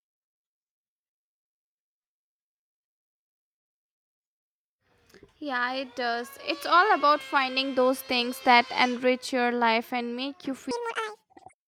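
Playback likely fitted to the wrong clock runs 1.95 times too fast from 10.71 s to the clip's end, after "life and make you", creating a section at the wrong speed. Speed and pitch jump together, leaving the speech hurried and roughly ten semitones higher.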